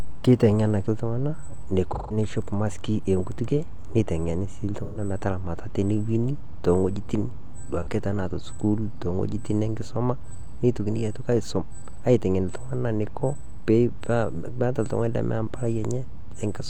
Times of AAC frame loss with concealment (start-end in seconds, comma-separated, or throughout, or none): 1.94-2.17, 4.83-4.99, 7.82-7.87